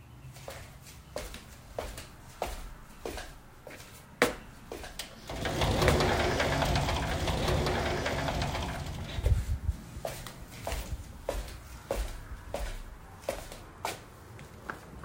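From about 4.3 s to 9.3 s there's a doubled audio track: the same sound plays a second time, trailing the original by roughly a second and a half and sitting a few dB lower. The copy is full-band and dry, with no tail or room colour, and it cuts in and out abruptly at both ends. The likely cause is a second, slower capture path feeding the same audio into the mix.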